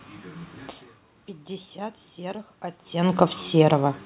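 No technical faults are audible.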